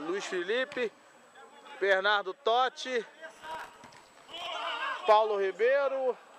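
Between 3.37 and 4.46 s the audio breaks into gritty crackle, a processor overload crackle. The processor misses dozens of deadlines in a row, and each short buffer of a few milliseconds is filled with stale, already-played audio whose edges do not join. On a spectrogram the stretch shows dense vertical broadband streaks. The waveform shows repeated short slices and hard steps at each boundary.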